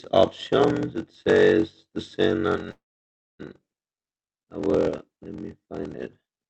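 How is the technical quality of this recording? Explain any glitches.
The recording has two clear technical faults: a steady buzz with slowed delivery throughout, and a brief freeze in the middle of the speech. It was carried over a call link using Opus at 32 kbps, which limits the sound to 8 kHz of bandwidth.

Block size mismatch (padded), throughout: A low buzz at about 46.9 Hz sits under the whole clip, and the speech runs at roughly 0.86 times its normal speed, yet its timbre stays natural. One stage writes shorter blocks than the next one reads, which fits a 1024-sample read block, and the shortfall in each block is filled with zeros. Those tiny silent gaps repeat at the block rate, producing the buzz and stretching the timing. A simple slowdown would also lower the pitch and change the timbre, so the unchanged timbre is what marks this fault.

Call audio freeze, 2.71 to 3.41 s: For about 0.68 s the last sound is held briefly, fades out, and then the line stays silent for around 0.6 s before the speech resumes exactly where it stopped. 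Nothing is lost. The pause is simply inserted into the speech, pushing everything after it later. The likely cause is packets delayed in transit until the jitter buffer ran empty. Unlike a packet-loss dropout, no speech is skipped when the audio returns.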